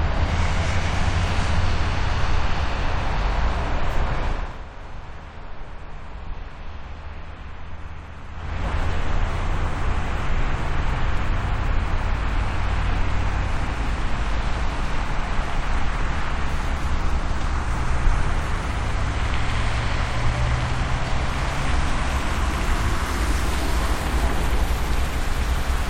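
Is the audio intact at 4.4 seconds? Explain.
No. From 4.28 to 4.64 s a fast ticking, zipping texture rides on the sound as its level drops by roughly 15 dB. This is zipper noise: the gain is lowered in 1 dB jumps, at roughly 30 steps a second, rather than as a smooth ramp. Each abrupt jump puts a small discontinuity in the waveform, so the fade turns into a rapid train of tiny clicks.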